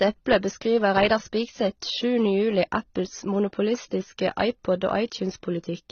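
Speech with transcoding between lossy codecs audible for the whole clip. Nothing is present above about 6.8 kHz, and two layers of coding damage sit on top of each other: smeared, swirly detail from an earlier low-rate stage, re-encoded with added warbling and hollowness. The likely cause is an AAC-LC encode at roughly 27 kbit/s, later re-encoded as HE-AAC at around 24 kbit/s, with the second codec wasting bits on the first one's artefacts.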